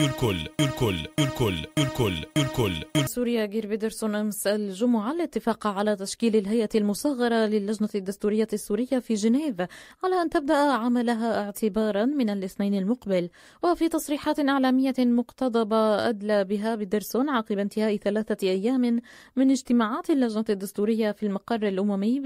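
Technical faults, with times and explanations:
0.00–3.07 s, broken-record loop: a stalled player or stream likely kept resending its last 590 ms fragment, already looping at the start, repeating four times while the real audio is lost.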